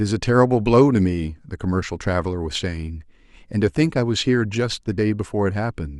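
At about 2.55 s the speech skips forward. That's an overlap between stream segments: two chunks of the stream claimed the same stretch of time, so the player trimmed the shared bit off, but that audio wasn't actually duplicated. Roughly 8 ms of real sound got thrown away and the waveform jumps across the gap. The stream was split into segments about 2 s long.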